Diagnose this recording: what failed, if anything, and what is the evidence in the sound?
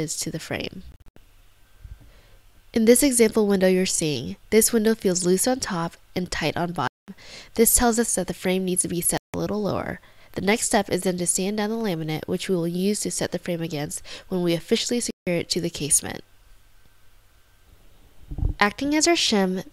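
A Bluetooth dropout, likely on the wireless playback link, left packets undelivered in time, silencing the output at 0.92–1.17, 6.88–7.08, 9.18–9.34 and 15.11–15.27 s. The gaps cut in abruptly or with a fade of a few milliseconds, and the sound resumes further on. The first gap is fragmented, with its longest hole about 81 ms.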